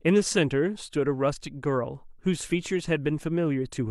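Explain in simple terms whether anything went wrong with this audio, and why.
Nothing went wrong with this speech recording. Listening through it, no moment stands out as a problem, so there is nothing here that needs fixing.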